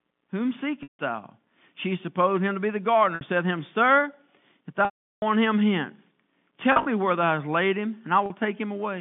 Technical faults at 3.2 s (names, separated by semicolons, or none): packet loss with pitch repetition